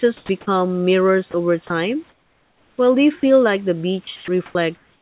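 From 0.17 to 0.29 s the room background gives way to comfort noise. The real hiss, about 37 dB below the loudest speech, turns into a smooth, featureless hiss only about 1 dB quieter. The likely cause is discontinuous transmission: the sender stopped sending in the pause, and the receiver generated noise from a rough outline of the background. On a spectrogram the grainy, uneven texture becomes an even wash. Like everything in this narrowband path, that wash stops at 4 kHz, consistent with G.711.

Between 0.27 and 0.29 s the onset is clipped by the voice detector. About 20 ms of the start of the speech is missing, likely because the detector was slow to notice sound returning, so the speech begins abruptly with no soft lead-in. On the waveform the flat noise floor jumps straight to a large swing instead of rising in a short ramp.

At 1.31–1.34 s, 1.67–1.70 s and 3.20–3.23 s, speech is dropped by the voice detector. 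Each time, 30 ms is replaced by comfort noise, losing 20 to 30 ms of speech, likely because the detector took it for background. Each one sounds like a tiny dropout or a clipped word edge. On the waveform it shows as a narrow notch where the speech envelope falls briefly to the noise floor.

From 2.09 to 2.78 s comfort noise again stands in for the background, this time for 690 ms and about 7 dB quieter. The background turns smoother and quieter, then returns. On a spectrogram this appears as a dimmer, uniform band bordered by the textured background on both sides.

From 4.04 s to the end the speech is chopped by the voice detector. Transmission likely switched on and off repeatedly, so about 500 ms in total is replaced by fill. Syllables break up. The waveform shows a broken envelope: bursts of speech separated by flat, even patches of noise.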